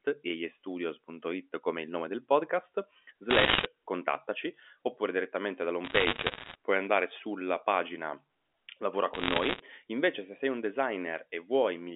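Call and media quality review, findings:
Bit errors on a digital phone line: bursts of sharp ticks and crackle over intact speech at 3.3–3.66 s (after "il nome del podcast"), 5.84–6.55 s (after "contattaci oppure direttamente") and 9.14–9.6 s. Flipped bits in single G.711 samples. First burst densest, at a few percent; later ones lighter. Band-limited 250 Hz–3.5 kHz telephone sound fits a 64 kbps A-law line.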